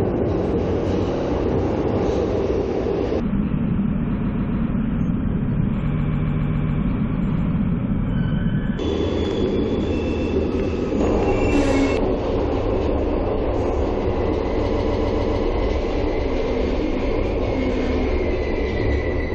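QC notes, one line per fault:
1.15–1.29 s, repeated frames: a 70 ms chunk plays three times in a row, a quick stutter that adds about 0.14 s. The same short run of compressed frames got written twice more, so the decoder just replays it.
4.17–4.59 s, repeated frames: a 140 ms chunk loops four times, adding about 0.42 s.
5.96–6.79 s, repeated frames: the worst one. The same 140 ms chunk comes round seven times, adding about 0.84 s of machine-gun stutter.
10.04–10.32 s, repeated frames: 140 ms chunk heard three times, adding about 0.28 s.
14.73–15.43 s, repeated frames: 140 ms chunk heard six times, adding about 0.70 s.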